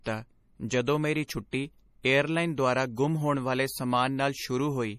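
From start to finish the speech carries plainly audible MP3 compression, likely the cause of its damage. The top end stops dead at about 15.2 kHz. The encoder had too few bits to spare. It dropped the treble and let weak frequency lines drop in and out between frames. That leaves a watery, swirling texture around the speech. S sounds turn metallic and chirpy. The degree of damage fits a bitrate around 40 kbps.

At 1.27 s a pre-echo appears. A sharp attack landed late in a transform block. The codec spread its noise across that whole block, sized for the loud part. So the quiet stretch just before the attack fills with hiss. The smear lasts about 18 ms. The attack itself loses its edge and sounds soft.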